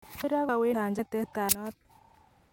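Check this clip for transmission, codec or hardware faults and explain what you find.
The clip has one fault type. Audio missing between chunks: skips at 0.24, 0.49, 0.74, 0.99, 1.24, 1.49 and 1.74 s, each dropping roughly 300 ms of speech with no silence, likely from losses during chunk handover.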